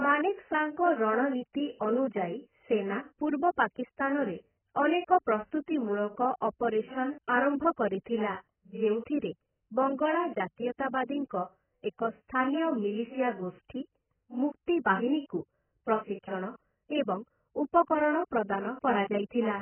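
Throughout the recording, the speech is dull and band-limited. Nothing remains above about 3.1 kHz. Sibilants lose their edge and turn fizzy, and sustained sounds warble. The damage is heavy. This is likely AAC compression, AAC-LC at a very low rate, which fits a bitrate around 10 kbps. At that rate the codec cuts the top of the spectrum away. It also quantises the remaining bands so coarsely that detail smears.

At 14.85 s, there is pre-echo. A sharp attack falls late in a codec block. The noise sized for the loud onset spreads backward into the quiet just before it, across about 18 ms. A brief hiss leads into the attack, which sounds soft and smeared.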